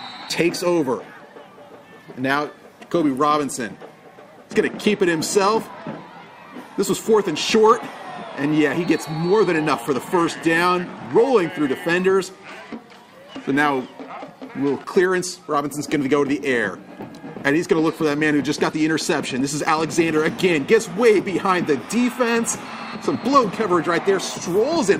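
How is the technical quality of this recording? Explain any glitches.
No glitches turn up anywhere in this recording. Nothing in it interrupts or damages the sound.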